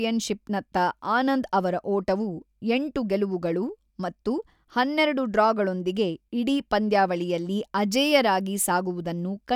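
Nothing goes wrong anywhere in this speech recording, so there's no fault to walk through.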